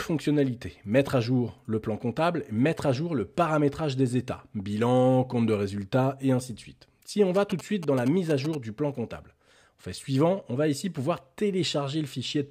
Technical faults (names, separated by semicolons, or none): GSM signalling bursts